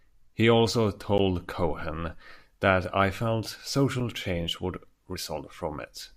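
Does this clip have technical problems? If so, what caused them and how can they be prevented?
Yes. Two sharp ticks interrupt the speech: one at 1.18 s and another at 4.00 s, between "that I felt" and "change would". Each is a block of digital silence, where the sound cuts out and then resumes with no fade. The holes are only about 10 ms and 5 ms long, short enough to register as ticks rather than gaps. This happens when the program fails to fill the output buffer in time. Larger buffers, higher processing priority, and guards against invalid values prevent it.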